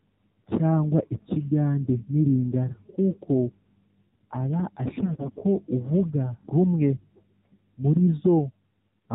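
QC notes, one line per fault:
Throughout, AMR narrowband mobile codec: speech squeezed through AMR-NB at 7.4 kbps, cutting everything above 4 kHz and leaving a plainly buzzy, synthetic, muffled quality.
4.92 to 5.41 s, AMR bit errors: roughly 7 percent of weakly protected bits flipped, misplacing excitation pulses, so pitch and level hold but sound turns hoarse, scratchy and gargly.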